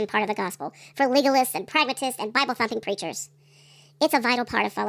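Wrong sample rate, throughout the clip: the speech runs about 1.45 times too fast and sits about 6.5 semitones too high, because the samples are being played out faster than they were captured, with no conversion between the two rates. That ratio fits audio recorded at 22 kHz but played at 32 kHz. Speed and pitch shift together, so the voice sounds hurried and squeaky, with syllables clipped short and the timbre thinned.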